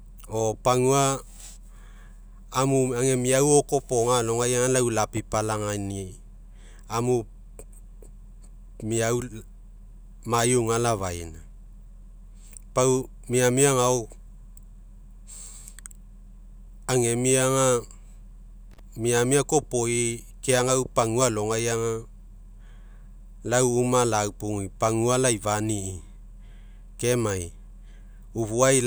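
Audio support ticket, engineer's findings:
Intermittent contact, 18.71–18.79 s. Speech drops out for about 33 ms, with crackle at both edges and faint hiss in the gap. Probable component: loose cable or plug in the signal chain. Mechanism: the connection opens momentarily, breaking the path and leaving only residual line noise. Reseat or replace the connector.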